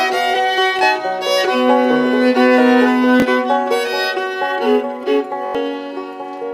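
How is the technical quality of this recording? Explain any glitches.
Three repeated-buffer glitches mar the recording, at 0.79 to 0.81 s, 3.20 to 3.22 s and 5.46 to 5.55 s. Fresh audio didn't reach the output in time, so the device replayed its last chunk, about 21 ms long, which fits a 1024-sample buffer. The first two repeat once, losing about 20 ms and giving a quick click-like stutter with a hard join. The last repeats four times, dropping about a tenth of a second, and comes across as a short buzzy stutter.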